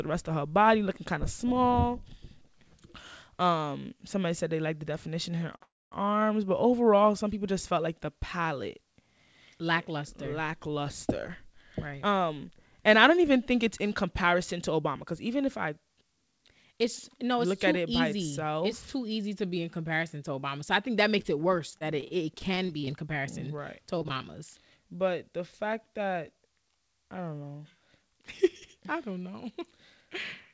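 At 5.56 s comes a short stall from a late packet. The next piece of audio was not there in time, so the jitter buffer ran dry. The receiver held the last sound for 46 ms and then carried on from the same point. Nothing is lost. You hear a sound stretched slightly too long, with a faint buzzy edge, and the rest of the audio now arrives 46 ms later.

From 5.63 to 5.93 s a call audio freeze follows directly. The last sound is drawn out for 289 ms. It turns into a short buzz that fades, and about 240 ms of that is silence. The audio then resumes exactly where it stopped, with nothing dropped. Packets were likely held up on the network, so the gap comes from waiting, not from loss.

Two stretches show a jitter buffer speed-up, from 11.43 to 14.83 s and from 17.15 to 19.03 s. Delayed audio had built up in the buffer. The receiver cut the excess by removing tiny pitch-length slices again and again. 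Both passages play at 105% speed with the pitch unchanged. The first loses about a fifth of a second and the second about a tenth. The speech sounds slightly rushed.

At 21.22 s there is a short concealed packet loss. 20 ms of audio never reached the decoder. The receiver bridged the hole by extending the preceding sound and blending back in. It passes as a brief smear or wobble, and a short consonant there could be swallowed.

Repeated packet loss (robotic sound) follows from 21.70 to 22.89 s and again from 23.99 to 24.25 s. The first span has nine gaps, and 15% of it is patched. The second has five gaps, and 32% of it is patched. The longest gap in each is 26 ms. The holes come in quick succession, each filled by continuing the last sound. The result is choppy, with small pieces missing. Throughout, nothing is heard above 8 kHz, which fits the G.722 codec at 64 kbps.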